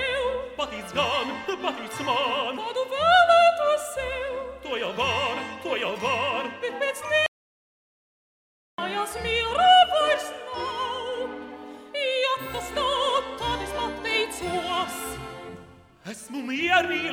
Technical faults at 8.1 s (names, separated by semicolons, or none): audio dropout to silence